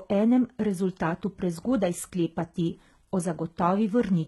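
From start to finish, the speech carries HE-AAC compression damage, and the damage is heavy. The treble has likely been rebuilt by spectral band replication rather than coded. Upper bands are copied from lower ones and shaped only roughly, so their harmonics do not match. S sounds come out gritty and lispy, with a metallic edge. Nothing is present above 11.8 kHz. The degree of damage points to a very low bitrate, around 16 kbps.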